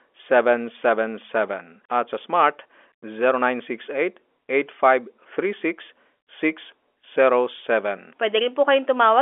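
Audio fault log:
No faults can be heard in the speech. It comes over G.711 telephone coding, which holds the sound within the 300 Hz to 3.4 kHz line band, with at most a faint noise floor that follows the level of the sound.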